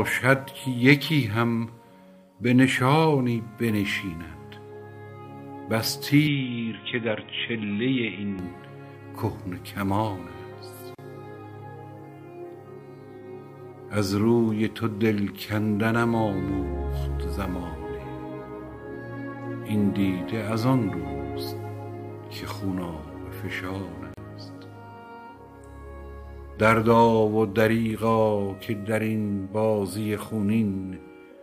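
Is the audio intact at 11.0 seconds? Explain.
No, a gap at a join of encoded pieces falls at 10.95 to 10.99 seconds. Two separately encoded pieces were butted together untrimmed, so the encoder's start-up delay and final-frame padding leave a gap of about 37 ms with smeared edges before the sound resumes where it stopped.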